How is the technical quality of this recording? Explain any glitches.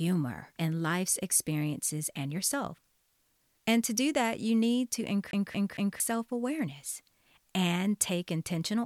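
The recording has one clear glitch, a CD stuck on one turn, from 5.31 to 6.0 s, just after "that you need to" and before "self awareness and take". A disc scratch keeps throwing the laser back one track, so a 0.23 s slice of speech repeats three times, each pass separated by a brief mute, giving a rapid, even stutter.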